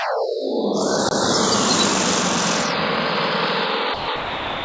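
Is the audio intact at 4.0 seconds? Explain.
No. From 3.94 to 4.08 s, about 140 ms of the sound is missing and steady noise fills the gap. This is likely sound dropped by the voice detector: the sender judged the sound as background and stopped transmitting, so the receiver played comfort noise until transmission resumed.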